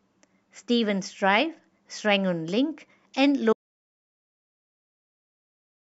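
An audio dropout to silence hits this speech clip at 3.53 s and lasts to the end: the input was likely lost while recording continued, writing silence with no room tone.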